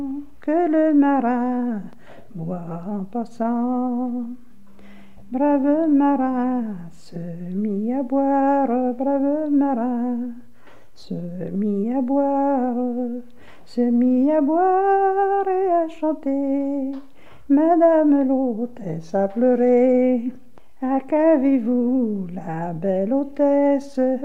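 No technical faults can be heard anywhere in the audio. Nothing in it calls for a time mark or an explanation of something going wrong.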